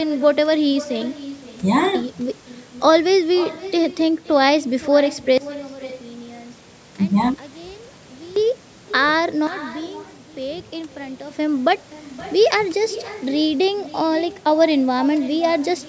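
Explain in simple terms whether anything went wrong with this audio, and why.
Everything said is followed about half a second later by a fainter, thinner copy of itself. This is echo with no canceller: the far end played the call through a loudspeaker, its microphone caught it, and nothing removed it before it came back.

The speech also drops abruptly to a much quieter level from 5.38 to 8.36 seconds, and less sharply again from 9.47 to 11.31 seconds, with the background noise falling along with it. Each is a sudden gain jump, likely from a volume setting applied instantly instead of being faded in smoothly.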